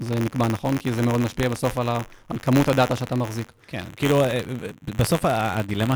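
Buffer tearing runs through the whole clip: the writer and reader of the audio ring buffer cross inside each period, splicing a small slice of audio from roughly 30 ms earlier into every buffer. The hard joins give a robotic buzz at 93.8 Hz, which fits a 512-sample buffer, heard only while speech is present.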